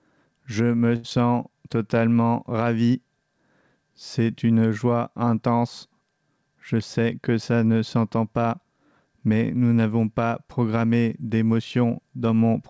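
From 0.96 to 1.06 s there is a short stall from a late packet. The jitter buffer ran dry, so the receiver held the last sound for 78 ms until the packet arrived, then resumed with nothing lost. On a spectrogram the harmonics run flat and smeared, with a slight dip in the waveform envelope.

Right after, at 1.10 to 1.12 s, comes a short concealed packet loss: 40 ms of audio never arrived and was bridged with only 7 ms of synthesised continuation, pulling the playout back by roughly 30 ms. It sounds like a quick smear or wobble. The spectrogram shows a brief vertical seam where the real signal resumes.

From 6.42 to 7.31 s a jitter buffer speed-up runs the sound at 108% speed, trimming roughly 70 ms by cutting out pitch-period-sized pieces again and again. Pitch stays the same but the passage feels hurried. The waveform keeps its cycle length, and the spectrogram events sit closer together. 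Across all of it, the G.722 call path leaves nothing above 8 kHz.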